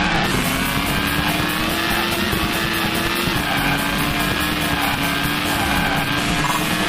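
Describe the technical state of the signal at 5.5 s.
At 5.5 s the signal carries a block size mismatch (truncated), present for the whole clip. Each block's tail is discarded, which fits 512-sample blocks being cut short. This gives a 138 Hz buzz and audio running 1.6 times fast at near-normal pitch. A spectrogram shows evenly spaced vertical seams, and the waveform breaks every 7.2 ms.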